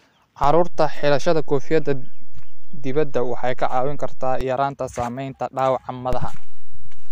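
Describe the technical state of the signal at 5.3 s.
At 5.3 s the speech signal is intact, with no audible fault at that moment.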